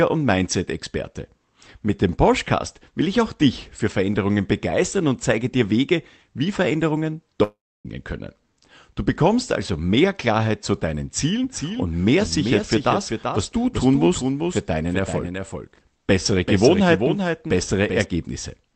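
At 7.43 s the speech stops for about 0.42 s, until 7.87 s. The last sound is stretched into a brief fading buzz, then gives way to near-silence for roughly 0.29 s before speech resumes further on, with the missing stretch simply gone. This is likely a long network dropout. Unlike a short packet loss, the concealment runs out and falls silent, and unlike an edit cut, there is that smeared tail before the gap.

From 11.44 s to 18.04 s a second full-band copy of the speech runs roughly 0.4 s behind the original, about 5 dB quieter. It switches on and off abruptly at those points. It shares the original's band limit near 8 kHz, consistent with the Opus call path carrying it, and adds no decay or room colour. That dry, fixed lag sets this doubled audio track apart from a room echo or reverb. The likely cause is a second capture path or an edit holding two offset copies.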